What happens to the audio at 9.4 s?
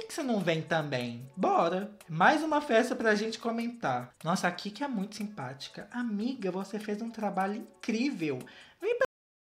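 By 9.4 s the audio has already stopped. A cut-off end occurs at 9.05 s: the sound is truncated mid-event and drops straight to digital silence, which runs from 9.05 s to the end of the file at 9.51 s. The final stretch of buffers was never written out or played back, so the signal has no natural decay or fade. The level falls abruptly from active sound to silence.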